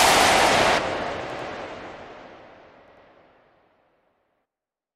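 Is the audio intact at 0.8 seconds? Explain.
No. From 0.77 to 0.79 s there is a brief glitch, the sign of damaged data in a compressed stream: corrupted bytes there leave the decoder misreading those frames and losing sync until it finds the next valid frame header.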